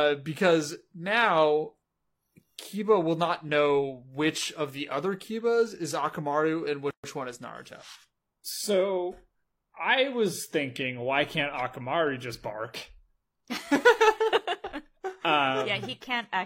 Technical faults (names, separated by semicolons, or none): gap at a join of encoded pieces